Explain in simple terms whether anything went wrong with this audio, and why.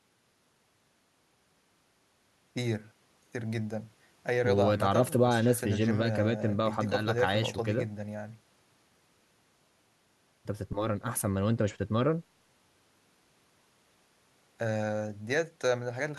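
Nothing went wrong with this audio; the speech comes through without any fault to point to.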